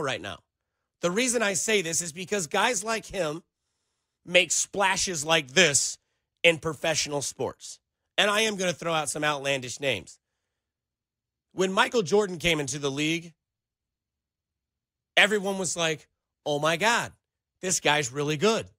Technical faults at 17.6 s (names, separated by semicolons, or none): resampler restarted on every block